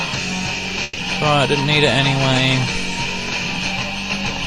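A burst of packet loss runs from 0.83 to 0.99 s: several consecutive packets never arrived in time, so the receiver stretched the last sound across about 140 ms, fading it as it went, and playback then jumped ahead with that stretch of audio gone.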